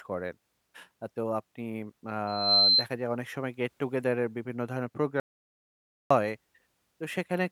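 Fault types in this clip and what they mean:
Loudspeaker feedback squeal: from 2.27 to 2.87 s, a pure 4.1 kHz tone swells over roughly a third of a second to sit about 10 dB above the speech. A microphone is re-amplifying its own loudspeaker, and at that one frequency the loop gain passes unity.
Audio dropout to silence: from 5.20 to 6.11 s, the speech cuts off abruptly into 906 ms of silence with no room tone beneath, then resumes mid-flow. The likely cause is a lost input, with the recorder writing silence until the signal returned.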